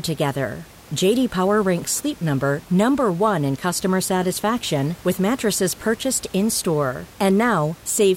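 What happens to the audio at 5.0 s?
Nothing goes wrong at 5.0 s: the speech carries on intact, with only the room noise sitting about 24 dB below it.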